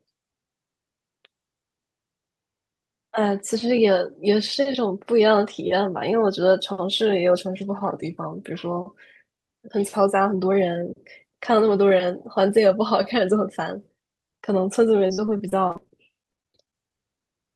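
From 15.07 s to 17.22 s the speech breaks into repeated packet loss, heard as robotic sound. Around twenty short holes, none longer than about 42 ms, follow one another closely. Each is patched by stretching the last bit of sound, so roughly a fifth of the stretch is concealed filler, and the result is choppy. On a spectrogram, harmonics freeze into flat, smeared bands between abrupt edges. The waveform shows repeated cycles and sudden joins.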